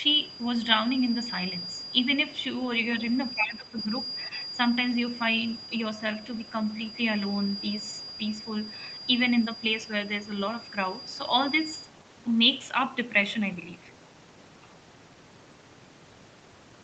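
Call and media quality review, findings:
Speech suppressed in double talk, 3.34–3.92 s. Echo canceller likely could not split near-end talker from loudspeaker echo during overlap and attenuated both. Speech level dips for about half a second, deepest around 15 dB.

Speech suppressed in double talk, 4.28–4.32 s. Same canceller, likely the same overlap misjudgement. Brief 40 ms duck of a few dB, heard as a small flicker in level.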